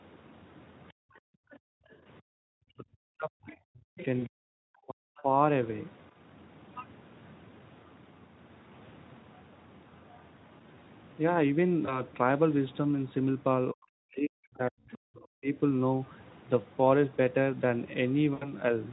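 A speech recording from a call, passed through the Speex codec, with four kinds of fault. From 0.24 to 7.32 s, and again from 14.93 to 15.26 s, the other side's voice is leaking through, roughly 20 dB under the talker. This is likely residual echo the canceller missed. On a spectrogram it shows as a faint second set of harmonics that doesn't follow the main voice. Between 0.93 and 2.46 s, background is gated by the echo canceller, for about one and a half seconds in total. The room noise drops by as much as about 40 dB and the waveform's noise floor flattens to near silence before returning. From 2.74 to 5.30 s and from 13.72 to 15.56 s, speech is suppressed in double talk, with the talker's level sinking by up to about 40 dB in pieces. The waveform shows the envelope carved into gaps. VoIP packet loss concealed by the speech codec occurs at 4.20–4.23 s and 11.85–12.04 s, consistent with single 20 ms frames, and at 18.34–18.54 s, which fits about 80 ms lost. 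Each appears as a smeared stretch of buzzy tone or coloured noise whose energy fades, with weak speech just afterwards.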